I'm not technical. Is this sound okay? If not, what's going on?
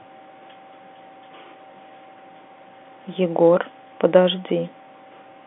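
Yes, nothing is wrong here.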